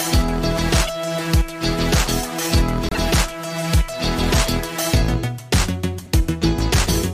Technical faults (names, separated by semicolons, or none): corrupt frame decoded